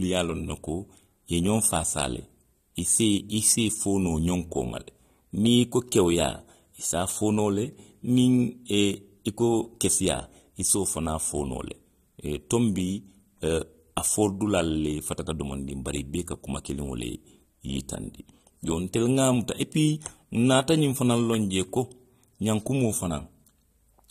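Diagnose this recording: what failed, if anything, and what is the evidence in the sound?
AAC compression throughout, at the codec stage: the speech sounds plainly dull and smeared, with nothing above 14.8 kHz, likely from AAC-LC quantisation at a low bitrate near 32 kbps.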